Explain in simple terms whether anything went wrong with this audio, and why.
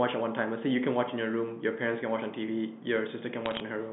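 Bit errors on a digital phone line, 3.46 to 3.6 s: flipped bits spoiled single samples of the telephone speech, giving a brief burst of sharp crackle.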